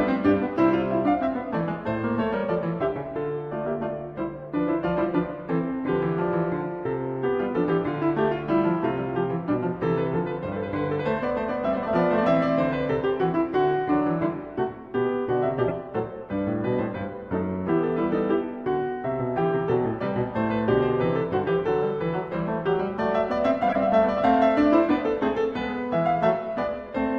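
Corrupt frame decoded at 15.68 to 15.71 s, 16.90 to 16.95 s and 23.68 to 23.76 s in the music: damaged bits in compressed frames were played through, so misread gains and codes threw energy into the wrong frequencies. The first is a loud, short blip consistent with a single bad frame. The second is a faint squeak that suggests about two frames. The third is a prominent, longer burst pointing to roughly three consecutive frames.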